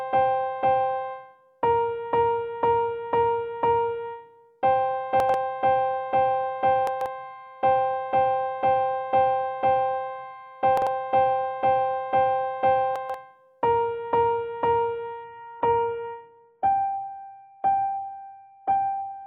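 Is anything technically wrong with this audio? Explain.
Yes, two kinds of trouble here.

First, chunks out of order, at 5.20 to 5.34 s, 6.87 to 7.06 s, 10.77 to 10.87 s, and 12.96 to 13.14 s. Each time a short block of about 46 ms, which fits a 2048-sample buffer at 44.1 kHz, turned up late and got played after the one to three blocks that should have followed it. Nothing goes missing, but the order scrambles briefly, so you get a jumbled stutter with hard joins.

Second, from 15.24 s to the end, the adaptive stream drops to a lower bitrate. The connection likely slowed and the player switched to a much leaner version, sounding like a fall from roughly 96 to 16 kbit/s AAC. The change is instant with no gap: the top end just vanishes, with nothing above 4.4 kHz, and what's left turns dull and a bit swirly with codec artefacts.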